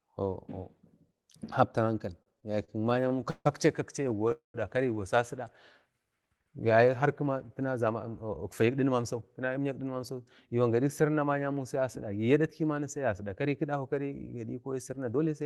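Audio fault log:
2.13–3.47 s and 4.09–4.32 s, repeated stalls (stutter): the speech catches and drags in short hitches, 15 in the first run and 4 in the second. The first run's longest hitch is 152 ms, and concealment fills 358 ms, about 27% of that span. The second run's hitches are 17 ms at most and fill 45 ms. Each time the jitter buffer empties, the receiver extends the last sound until packets arrive, so the audio is stretched rather than lost.
4.32–4.56 s, call audio freeze: right after the second stutter run, the sound hangs for 224 ms. It begins as a drawn-out continuation of the last sound and fades into 140 ms of silence before resuming where it stopped. Nothing is cut, but a gap of that length is inserted. The likely cause is packets held up in transit, leaving the jitter buffer empty while the receiver filled the wait.
7.26–9.96 s and 14.73–15.42 s, jitter buffer speed-up: the speech runs at about 108% of normal speed, with no change in pitch, so it sounds slightly hurried. 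The first stretch loses roughly a fifth of a second and the second roughly 50 ms. The buffer holds more audio than its target, so the receiver repeatedly cuts out pitch-period-length pieces to bring the delay back down.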